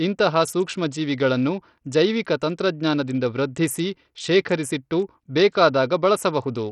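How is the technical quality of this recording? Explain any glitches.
The recording is damaged by codec artefacts throughout. The speech has a gritty, aliased top end with flickering treble, likely from heavy Bluetooth SBC compression. A starved bit pool, fitting roughly 64 kbps, leaves the upper sub-bands nearly empty and the rest coarsely quantised.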